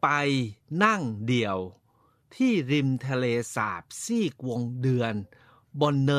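No technical faults can be heard anywhere in the speech.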